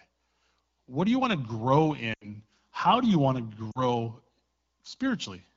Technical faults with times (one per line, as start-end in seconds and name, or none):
2.13-2.28 lost AMR speech frames
3.71-3.80 lost AMR speech frames